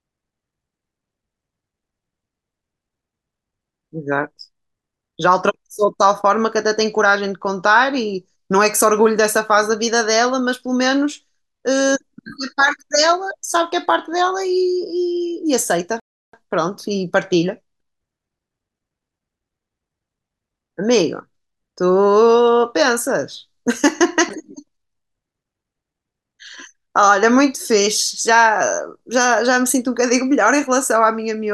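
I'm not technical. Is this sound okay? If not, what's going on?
No, there is a rebuffering stall from 16.00 to 16.34 s. The player ran out of downloaded audio, so the speech goes silent for about a third of a second, then picks up exactly where it stopped. Nothing is missing; the pause just adds time.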